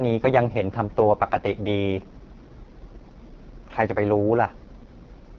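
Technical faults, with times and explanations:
Throughout, AMR wideband (HD Voice) codec: rough, raspy speech suggests the lowest 6.6 kbit/s mode's sparse pulse model, with noise-filled top band and nothing above 7.1 kHz.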